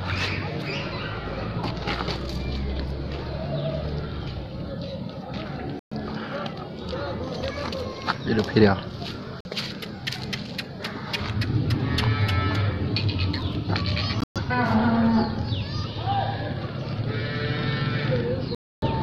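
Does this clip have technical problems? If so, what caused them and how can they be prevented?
Yes. Sound cuts to silence at 5.79–5.92 s, 9.41–9.47 s, 14.21–14.38 s and 18.55–18.88 s, then resumes further on. This is likely Bluetooth dropout, where late wireless packets are discarded. Keep the source close to the headphones, with fewer obstacles and less 2.4 GHz interference.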